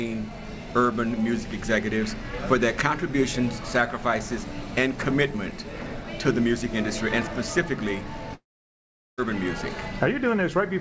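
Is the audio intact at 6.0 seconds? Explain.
Yes, the audio is intact at 6.0 seconds: nothing drops out, clicks or distorts there, and the only thing to hear is the WebRTC call path's usual coding noise and steady band limit, with nothing above 8 kHz, which fits a wideband codec such as G.722.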